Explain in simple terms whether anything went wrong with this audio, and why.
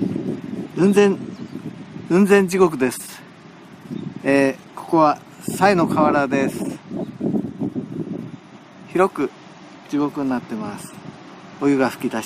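Nothing went wrong; the audio has no audible problems.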